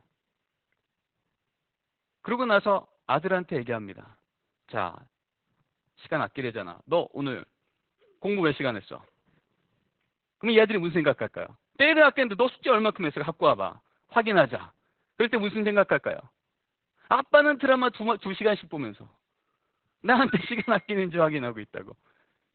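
Throughout the clip, Opus voice compression has been run at a very low rate: the encoder dropped to narrowband and coded the speech with its SILK linear-prediction coder alone, which fits a bitrate of around 8 kbps. Nothing is left above 4.4 kHz, and the excitation is coded very coarsely. The damage is heavy. The speech sounds muffled and telephone-like, with a hoarse, slightly robotic roughness in the voicing.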